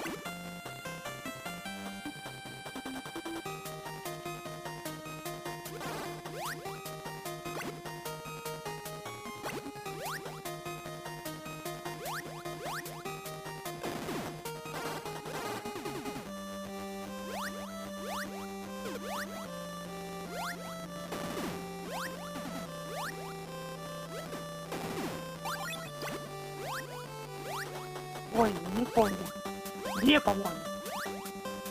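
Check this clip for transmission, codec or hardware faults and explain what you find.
A steady 100 Hz buzz runs under the sound for the whole clip, growing louder where the audio is louder and falling back in quieter passages. This is a filter restarted on every block: the filter discards its internal state at each block boundary and starts again from silence, leaving a small transient at the start of every block. Those transients repeat 100 times a second, which points to blocks about 10 ms long.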